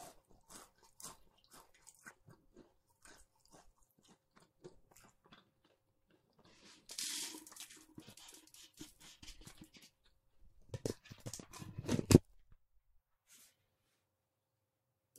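A recording of sounds with two short glitches, at 2.09 s and 9.22 s, each lasting under 20 ms. Both are damaged data in a compressed stream: a patch of the encoded bytes got corrupted, so the decoder misread those frames, lost sync and had to hunt for the next valid frame header before playback settled. That's why each spot comes out as a quick blip.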